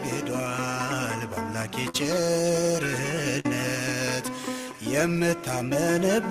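At about 1.89 to 1.96 s there's a short concealed packet loss: roughly 40 ms of audio never arrived in time, so the receiver stretched the preceding sound across the hole for about 44 ms and blended back in, leaving a quick smear or wobble.

Then at 3.40 to 3.46 s comes a burst of packet loss. Around 40 ms went missing, the last sound was carried on and faded over about 46 ms, and playback picks up further along, so that stretch of audio is simply gone.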